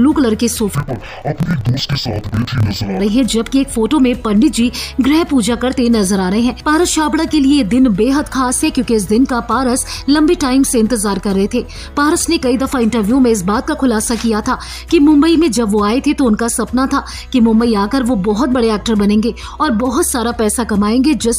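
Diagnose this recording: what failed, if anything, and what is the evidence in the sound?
Interleaved audio read as planar, from 0.75 to 3.00 s, a sample-format conversion fault. The sound drops an octave, doubled and choppy at 38.3 Hz. Each 26.12 ms block had its alternating left-right samples split into halves played at half speed.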